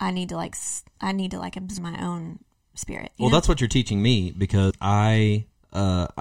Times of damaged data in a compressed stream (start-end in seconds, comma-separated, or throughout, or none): 1.77, 4.69